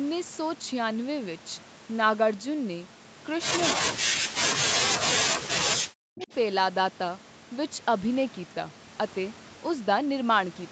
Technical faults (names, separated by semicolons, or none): speech suppressed in double talk; echo leak